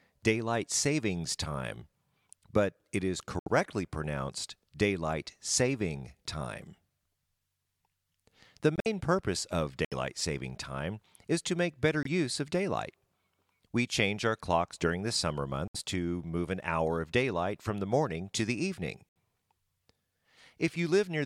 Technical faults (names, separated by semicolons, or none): corrupt frame muted